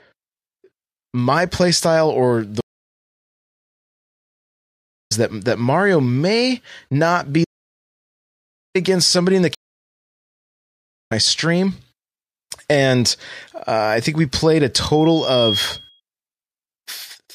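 At 2.61 s, after "my playstyle or the", a stream reconnect drops the speech into 2.5 s of silence. A fresh decoder then picks up at "that that", roughly 3 s further into the stream, so the gap and the forward jump arrive together.

From 7.45 to 8.75 s, after "may not be", an audio dropout to silence leaves 1.31 s of silence with no room tone, likely from a lost input. The speech in that stretch is simply gone, and the timeline carries straight on to "against somebody in the" without a skip.

At 9.55 s, right after "against somebody in the", a second reconnect brings 1.56 s of silence and resumes about 1 s later in the stream. That leap past the silence is what separates it from the dropout.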